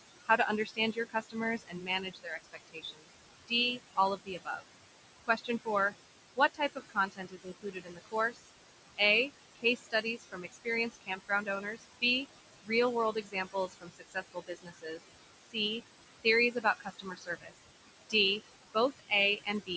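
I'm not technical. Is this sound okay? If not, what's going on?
No, not quite. There are noise suppressor artifacts all the way through. A filter keeps turning down the room noise between phrases and lets it back up under the speech, so the background pumps and the voice can sound thin and watery.

There is also speech cut by the noise suppressor, where it mistakes bits of talking for noise. Across 0.25 to 4.62 s, 5.27 to 8.42 s, 9.56 to 15.57 s, 16.23 to 18.14 s and 18.74 to 19.7 s, soft sounds and word endings get swallowed, roughly a second or two in total within each of the longer stretches.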